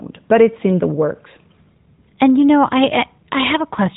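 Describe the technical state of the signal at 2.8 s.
At 2.8 s the signal is intact, with no fault at that moment, and the speech there still carries the narrowband character of the AMR-NB mobile codec at 12.2 kbps, with nothing passing above about 3.8 kHz.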